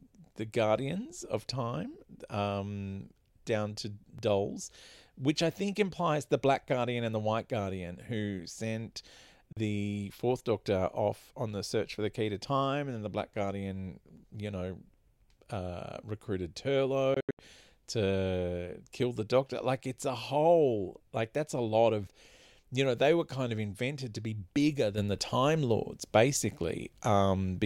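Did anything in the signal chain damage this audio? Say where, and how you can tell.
Yes. Audio missing between chunks occurs at 4.19 s, 14.17 s (just before "you know") and 24.16 s, exactly 10 s apart. Each time, roughly 10 ms of sound vanishes and the two sides butt together with no silence, so the sound skips forward. The strict 10-second spacing points to the recorder or driver buffer stage. Audio was most likely written in 10-second chunks and a sliver was lost at each handover.

Bluetooth dropout, at the playback stage, appears at 9.52 to 9.57 s as a clean hole of about 41 ms. A larger one runs from 17.14 to 17.39 s, between "uh recruited" and "to kill the". There, about 183 ms of silence is scattered across 244 ms, with the longest gap about 81 ms. The sound resumes as if it had kept playing underneath, which likely means wireless packets missed their deadline. The gap lengths fit a couple of packets lost in the first event and several in the second.

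A sudden gain jump occurs at 24.98 s, right after "invented to be bigger", and lasts to the end. The level rises by about 7 dB in a single step, and the background noise rises with the sound. That shared rise shows the change is a digital gain step, not a change in how loudly the source was produced. It was likely a gain setting in the processing or driver stage applied without a ramp.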